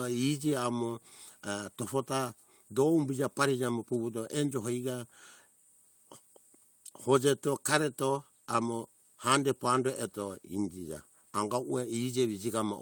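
No technical faults can be heard anywhere in the recording, and the signal holds steady throughout.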